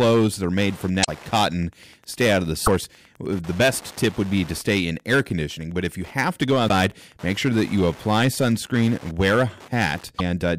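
From the start there's Wi-Fi interference underneath the speech: a steady tick every 102.4 ms, so roughly ten a second, sitting something like 25 dB below the talker. That's a nearby radio's beacon being picked up and rectified somewhere in the audio circuit, so the pulses come through as clicks, not radio hiss. It's constant across the whole clip.

Riding along with that, the whole recording is hard clipped. The level was pushed about 9 dB past what some stage could pass, so the peaks get sliced flat, and a few percent of the samples end up cut off at that stage's limit. Those squared-off tops throw harmonics way up the spectrum, which is why the loud peaks have a distorted edge.

Then there are four spots of damaged data in a compressed stream. The first runs from 1.01 to 1.09 s, right after "made from". The second is 2.63 to 2.68 s, between "out of the" and "the best tip would". The third is a short one at 6.68 to 6.70 s, between "you have to go" and "make sure that you", and the last is 10.15 to 10.21 s. 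Each time, corrupted bytes made the decoder misread frames and hunt for the next header, so you hear a brief glitch in the sound.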